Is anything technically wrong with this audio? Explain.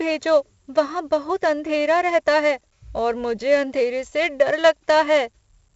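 Yes. 4-bit ADPCM compression runs throughout the speech. Each sample is coded as a small 4-bit step away from a predicted value, with the step size adapting as it goes, so the error is a hiss that rides up and down with the level. The damage is heavy: a gritty noise coats every loud syllable, and sharp onsets distort where the step cannot grow fast enough. Nothing reaches above 7.8 kHz, which fits a 16 kHz sample rate at 64 kbps and leaves the sound dull.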